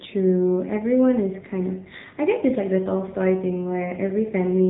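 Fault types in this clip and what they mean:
AMR narrowband mobile codec: The speech has gone through the narrowband mobile speech codec used on 2G and 3G networks. Nothing above about 3.8 kHz survives, so the sound is thin and boxed in. The codec models the throat and mouth as a filter fed by a few pulses per short frame. At low bit rates that model shows. Here the damage is plainly audible: a buzzy, synthetic edge that fits a rate near 7.4 kbps.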